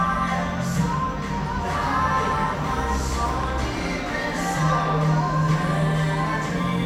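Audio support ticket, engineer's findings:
Train of clicks, 3.43 to 4.53 s: about five sharp ticks, uneven spacing near 3.7 per second, poking a few dB above the sound. Likely a struggling interface or nearby equipment interference injecting near-identical pulses into the path.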